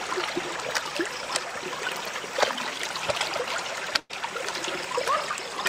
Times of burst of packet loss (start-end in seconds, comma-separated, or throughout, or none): 3.99-4.11